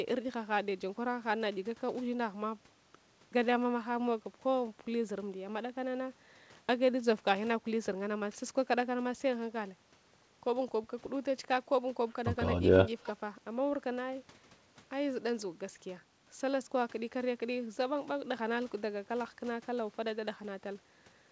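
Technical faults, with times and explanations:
No faults; the speech arrives over a call path with nothing above 8 kHz, which points to a wideband codec such as G.722 at 64 kbps and is normal for that link.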